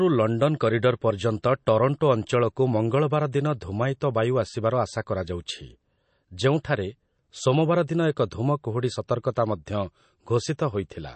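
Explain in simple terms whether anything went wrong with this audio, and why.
Yes. Throughout the speech, sound above 8.3 kHz is gone and s sounds turn watery and swirly, likely from MP3 compression; a simple treble cut wouldn't add that swirl.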